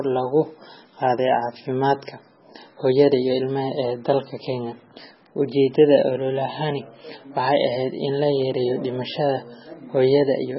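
From start to finish the speech sits behind a hard ceiling, with nothing above about 5.6 kHz, and it has a watery, swirly quality, with sibilants turning chirpy and metallic. That points to heavy MP3 compression, likely at a very low bitrate, somewhere around 16 kbps. Starved of bits, the encoder chopped the treble at a fixed point and kept dropping quieter frequency lines, which flicker in and out from frame to frame.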